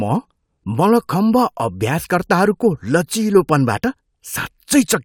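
No technical faults can be heard anywhere in this speech recording. The audio continues without any break or disturbance to point to.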